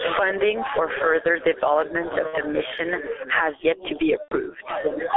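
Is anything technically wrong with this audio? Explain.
Yes, there are three kinds of fault.

Gain pumping runs through the whole clip, with a gain swing of roughly 15 dB. Likely cause: input gain set far too high, with a fast limiter or compressor clamping it down on every peak and releasing it in the gaps. Loud and quiet passages end up squeezed together, and the sound feels flattened and breathing.

G.723.1 codec coloration is also present throughout. The band runs only from about 300 Hz to 3.5 kHz, the codec runs at 6.3 kbit/s, and the damage is heavy. Its long 30 ms frames and slowly updated vocal-tract model cannot follow fast changes in the speech, so the voice sounds muffled and hoarse, and consonants smear into one another.

VoIP packet loss concealed by the speech codec occurs from 2.27 to 2.39 s and from 4.22 to 4.38 s. About 60 ms and 90 ms of audio are missing, consistent with whole 30 ms frames dropping out. 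In each gap the decoder extends the last pitch and filter state at falling gain, so the sound stretches and fades. Because every frame is predicted from the one before, the voice stays weak or distorted briefly after each gap ends.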